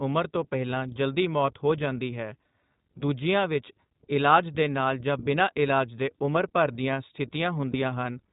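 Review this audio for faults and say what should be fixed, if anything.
The whole clip passes through the iLBC codec. Its damage is plainly audible. Nothing above 4 kHz survives, so the speech sounds narrowband. The voice also has a rough, synthetic edge. This fits a 15.2 kbps mode with 20 ms frames. Each frame's excitation is coded on its own, which keeps the speech clear but grainy. To prevent this, carry the call on a wideband codec such as Opus instead of iLBC.

Lost iLBC frames cause two short gaps, at 3.00 s and at 7.72 s. Each is a 20 ms dropout. The first comes just before "ਵਿੱਚ ਇਲਾਜ". In both, the decoder fills the hole by repeating the last pitch cycle with some added noise. That gives a brief held, slightly buzzy sound. Because iLBC frames stand alone, the speech recovers almost at once. To prevent these, reduce packet loss on the network path or add forward error correction.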